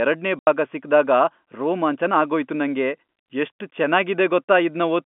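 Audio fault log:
0.39–0.47 s, packet loss filled with silence: the speech drops out completely for 80 ms just before "ಭಾಗ ಸಿಕ್ದಾಗ", with abrupt edges where the waveform is cut off and resumes. The receiver had nothing to play for that stretch and inserted dead silence, and the hole's length fits a run of 10 ms packets lost together. The narrow telephone band of the G.711 line carries the speech cleanly on either side.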